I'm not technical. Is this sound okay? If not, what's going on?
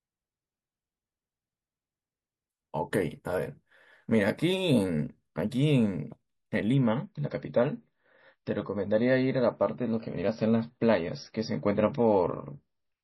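No. An adaptive stream at a lower bitrate takes over from 6.74 s to the end. The connection seems to have slowed, so the player switched without a gap to a cheaper copy of the speech. Codec artefacts rise, so it sounds more smeared.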